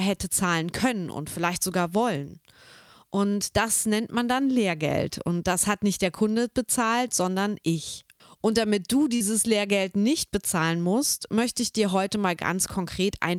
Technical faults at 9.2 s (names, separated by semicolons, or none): short concealed packet loss